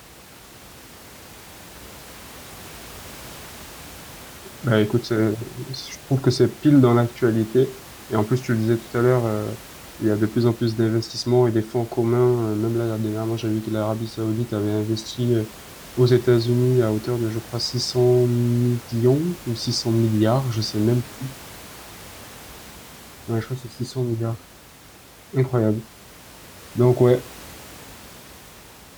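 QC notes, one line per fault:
No technical faults are present in the signal, and the faint room background sits about 21 dB below the speech.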